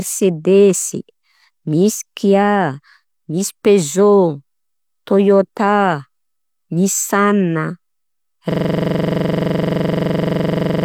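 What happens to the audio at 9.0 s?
At 9.0 s the audio is caught in a system hang loop that runs from 8.52 s to the end. The driver has stalled while the hardware replays one 42.67 ms block, which fits a 2048-sample buffer, so the speech becomes a rapid stutter repeating at 23.4 Hz.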